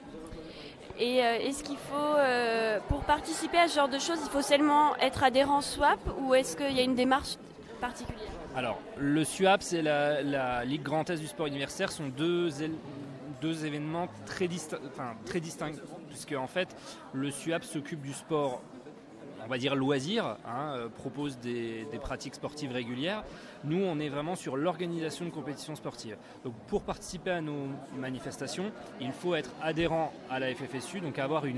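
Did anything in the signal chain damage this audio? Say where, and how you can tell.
No signal-chain damage heard.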